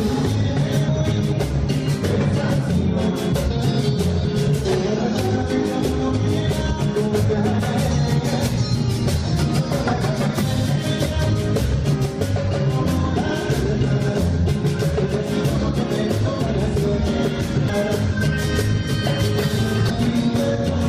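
Damaged data in a compressed stream causes short glitches at 0.87 s, 4.24 s, 11.11–11.13 s, 17.68–17.70 s and 19.89 s. The decoder misreads corrupted frames and loses sync. Each glitch is heard as a chirp, squawk, click or short hole.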